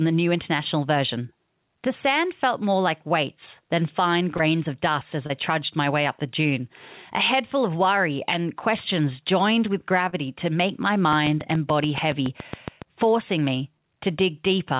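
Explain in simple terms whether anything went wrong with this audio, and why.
Short concealed packet loss happens three times, at 4.37 to 4.42 s, at 5.26 to 5.32 s between "of dust as" and "trudged my way up", and at 10.09 to 10.15 s after "and questions joined with". Each time about 30 ms of the call arrived too late. The receiver covered the gap by stretching the sound just before it, so you hear a quick smear or wobble.

A train of clicks runs from 11.13 to 12.83 s, starting after "to make my" and ending before "forcing me". About fifteen clicks come at a steady pace of roughly seven per second, ticking over the speech. They are likely interference from nearby equipment or a faulty connection or power supply.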